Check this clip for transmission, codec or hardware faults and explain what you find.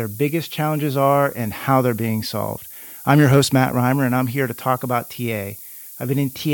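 A single fault runs from start to finish: low bit depth with noise shaping. The speech appears reduced to about 7 bits, with the rounding error fed back so it piles up at high frequencies. It sounds like a steady, thin hiss roughly 15 dB below the speech, brightest at the top. On a spectrogram it appears as a constant noise floor climbing steeply toward the upper band, and the waveform shows a fuzzy baseline even in pauses.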